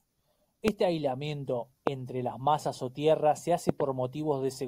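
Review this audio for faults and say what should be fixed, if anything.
Three loud pops cut sharply through the speech, at 0.68–0.70 s, 1.87–1.89 s and 3.69–3.71 s. Each is a single hard crack lasting only a couple of hundredths of a second and standing roughly 20 dB above the speech, which continues underneath. The likely cause is a brief voltage spike entering the signal chain, from a connector being disturbed, a switch, a static discharge or a driver glitch. The following stages turn the spike into a short, sharp transient. To prevent it, secure and ground all cables and connectors, avoid switching or handling equipment while recording, and keep audio drivers stable.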